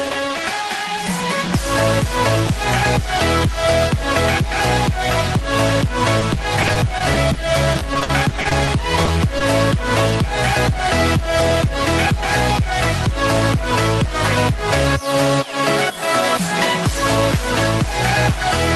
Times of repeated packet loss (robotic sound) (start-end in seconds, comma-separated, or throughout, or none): 6.19-7.37, 7.73-8.69